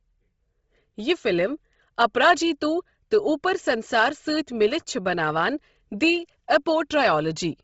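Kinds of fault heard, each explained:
Bluetooth LC3 compression: The speech stops dead at 7.7 kHz, and its top end sounds breathy and grainy. A transform codec has zeroed the upper bands and filled them with noise. The heavy damage fits a 24 kbps stream in 7.5 ms frames, likely Bluetooth LC3.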